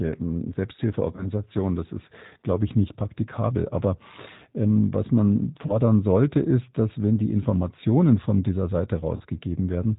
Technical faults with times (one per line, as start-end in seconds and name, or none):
0.00-9.99 G.729 codec
1.16-1.27 VoIP packet loss concealed by the speech codec
5.66-5.74 VoIP packet loss concealed by the speech codec
9.16-9.24 VoIP packet loss concealed by the speech codec